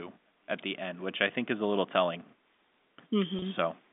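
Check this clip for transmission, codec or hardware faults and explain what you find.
One transmission fault appears, near the end of the speech, heard through the narrow 200 Hz to 3.6 kHz telephone band of G.711 coding. Packet loss with pitch repetition, 3.39 to 3.42 s: about 30 ms of audio failed to arrive, which fits a single lost packet. The receiver bridged the gap by repeating the last pitch period, so the sound briefly holds and turns slightly buzzy before normal audio resumes.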